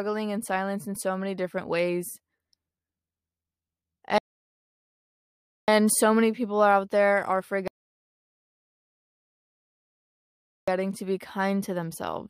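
At 4.18 s the speech drops into silence and picks up again at 5.68 s exactly where it left off, and at 7.68 s it stops again, this time for 3 s, resuming at 10.68 s with nothing skipped. Both gaps are rebuffering stalls: playback outran the downloaded audio, so the player waited for more to arrive. No speech is lost, but the pauses add about 1.5 s and 3 s to the running time.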